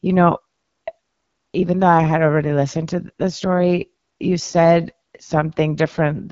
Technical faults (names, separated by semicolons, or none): AMR wideband (HD Voice) codec